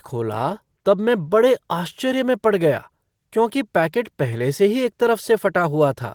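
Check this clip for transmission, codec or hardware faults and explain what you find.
I found none of the faults you asked me to check for in this clip.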